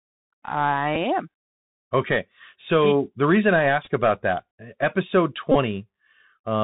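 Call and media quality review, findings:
Bluetooth CVSD headset codec, whole clip: muffled narrowband speech with nothing above 4 kHz, scratchy sibilants, granular hiss under speech, distortion on loud high content. One-bit delta modulation with adaptive step, consistent with a 64 kbit/s stream, where the step can't track fast slopes.

Bluetooth headset packet repeated, 0.95 s, 3.84–3.90 s (after "the reason I"), 5.52–5.55 s (after "about that episode"): small tick, then brief buzz bursts, then a steady buzz near 267 Hz. Lost headset packets re-decoded, repeating every 3.75 ms.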